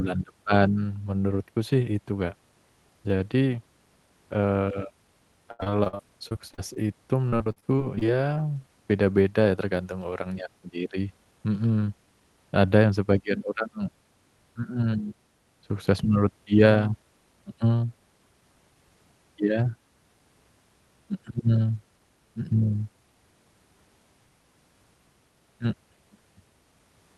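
Repeated packet loss (robotic sound) hits 5.51–6.88 s and 7.30–8.38 s. Brief holes, up to 77 ms, are filled by stretching earlier sound, leaving choppy speech that shows as smeared, stuttering harmonic bands.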